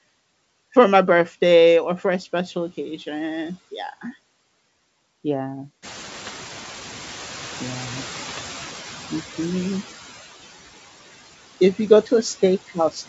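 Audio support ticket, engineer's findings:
Residual background throughout, sinking between phrases and swelling under speech; noise suppressor artifacts. Suppressor pulls estimated steady-noise bands down by about 12 dB frame by frame, leaving the leftover noise modulated.

5.82 to 8.75 s: background noise jumps by about 16 dB near 6 s, then passes through loud before gradually fading. Noise suppressor catching up, with its noise estimate lagging roughly 2.9 s and reduction only about 7 dB early on.

6.15 to 6.33 s and 8.19 to 8.39 s: pops and short rough bursts with brief level jumps. Bit errors on an ADPCM link, most likely the G.722 path. Flipped bits, a small fraction of a percent, disturb decoder step size and predictor, so each error rings on.

12.68 s to end: closing speech swallowed, dipping by up to about 11 dB over roughly 100 ms in total. Speech cut by the noise suppressor, which mistook the soft tail for background and attenuated it with the noise.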